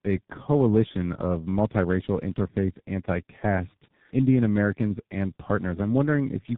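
From start to end, the speech carries tandem speech coding: it passed through AMR-NB at 10.2 kbit/s, then G.711 mu-law, then G.723.1 at 6.3 kbit/s, being decoded and re-encoded at each hand-off. Since both AMR-NB and G.723.1 are model-based coders, the second works on the first's artefacts and adds its own, leaving speech rougher, noisier, more muffled and warbly than either alone. The band stops near 3.8 kHz, so it is narrowband throughout.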